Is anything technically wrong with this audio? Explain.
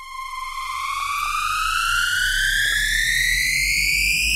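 Yes, DAB burbling from 1.0 to 1.26 s and 2.64 to 2.83 s. Bit errors near a fraction of a percent corrupt sub-band levels, giving short noise blips and level jumps in single sub-bands over the sound, seen as flickering spectrogram blocks.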